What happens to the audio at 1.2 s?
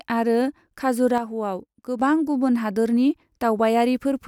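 One stereo channel likely drops out from 1.18 to 2.00 s. Once the two channels are summed to mono, the speech common to both falls abruptly by about 6 dB, and anything carried only in the lost channel vanishes until the channel returns.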